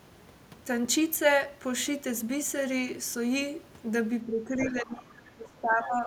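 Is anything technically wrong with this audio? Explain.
Yes. From 4.24 s to the end at 6.06 s there is speech suppressed in double talk. This is likely an echo canceller that could not tell the local talker from loudspeaker echo while both sides spoke. It turned everything down, so the voice dips and breaks up for roughly one and a half seconds, at worst by around 25 dB.

There is also the other side's voice leaking through, at 4.59 to 4.81 s and briefly at 5.84 to 5.88 s. This is likely echo from the loudspeaker that the canceller left in the microphone signal. It comes through as short scraps of a second voice, around 15 dB below the main speech.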